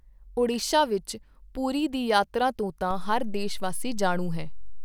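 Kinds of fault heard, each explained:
DC step: a low thump lands at 2.91 s, right after "ਪੁਰੀ ਦੀ ਯਾਤਰਾ ਤੋਂ", while the speech carries on unaltered. The waveform's zero line jumps by about -28 dBFS there and stays offset to the end, as when a converter recalibrates or an offset input switches in.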